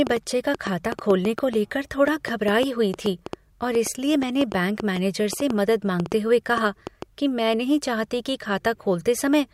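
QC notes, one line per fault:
0.07–7.03 s, train of clicks: irregular ticking at about 4.9 per second, roughly forty sharp pulses peaking about 10 dB over the speech, likely interference. They show as thin vertical spikes on the waveform and full-height stripes on the spectrogram.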